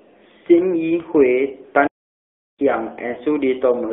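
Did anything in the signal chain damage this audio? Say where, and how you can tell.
Yes. At the codec stage, the whole clip has passed through the AMR narrowband mobile codec. Band-limiting to roughly 250 Hz to 3.6 kHz strips the top end. The buzzy, synthetic texture fits a rate near 10.2 kbps, where a vocal-tract model driven by sparse pulses replaces the real waveform.

On the network side, lost AMR speech frames appear twice. A brief warble at 1.02 to 1.07 s matches one missing 20 ms frame. A longer smear at 3.12 to 3.19 s fits two lost frames, about 40 ms. Each time the decoder repeated its last good settings at falling gain.

At playback, a playback stall silences the audio from 1.87 to 2.59 s, about 0.71 s. The speech cuts out in mid-flow and then resumes. This is likely the player running out of data or its thread being blocked until it recovered.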